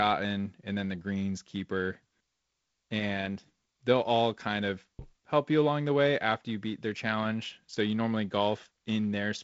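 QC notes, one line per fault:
Nothing stood out on listening to this speech clip.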